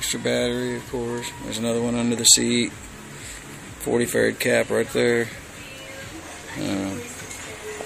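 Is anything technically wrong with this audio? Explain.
No, nothing technically wrong can be heard in this audio, and the signal stays steady and intact throughout.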